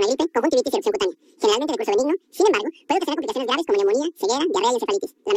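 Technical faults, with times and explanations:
throughout: audio read two samples at a time (double speed). Sample pairs are taken as single frames, so the sound runs twice as fast and 12 semitones (an octave) higher. Unlike a plain sample-rate mismatch, any strong content above a quarter of the sample rate folds back.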